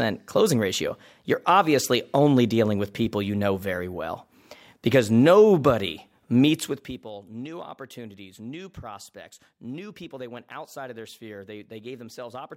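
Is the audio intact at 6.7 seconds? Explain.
No. At 6.7 seconds the speech is in the middle of a burst of zipper noise running from 6.52 to 7.08 s, heard as a fine ticking or zipping laid over the voice as it drops in level. The fade is applied in coarse 1 dB steps, about thirty a second, with no smoothing between them. Each jump leaves a small click, and together they stack into that rasp across a fall of roughly 20 dB.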